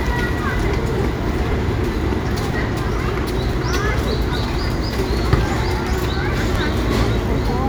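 Overlapping chunks produce clicks at 0.51, 1.52, 2.53, 3.53, 4.54, 5.55 and 6.56 s. The sound is handled in 1.0 s chunks, each starting about 7 ms before the previous one ends, so that sliver plays twice at every join, causing a regular stutter.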